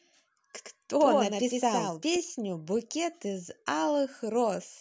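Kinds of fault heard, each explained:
Doubled audio track: From 0.64 s to 2.16 s, a full-band copy of the speech trails about a tenth of a second behind, somewhat quieter. It starts and stops abruptly, with no decay or room colour. It likely comes from a slower second capture path.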